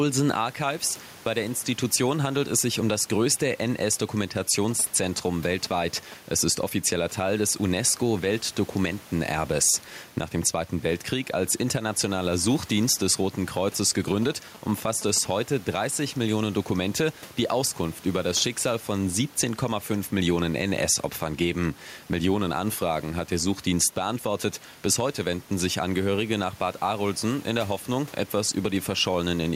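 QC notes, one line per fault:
Throughout: gain pumping. The input gain is likely set far too high for the microphone, with a fast limiter pulling the level down on each loud syllable and releasing it in the pauses. The gain swings by around 5 dB. Loud and soft passages sit unnaturally close in level, so the speech sounds squashed and breathing.
4.71 to 6.14 s and 14.08 to 15.27 s: GSM signalling bursts. A nearby 2G phone is exchanging short groups of radio bursts with its network, and the audio circuitry rectifies that RF into the signal path. Each episode is a galloping dit-dit-dit of brief buzzes pulsing at 216.7 Hz, lasting a little over a second and sitting well below the speech level.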